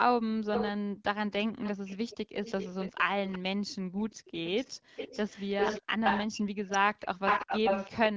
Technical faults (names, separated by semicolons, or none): echo leak; background gated by the echo canceller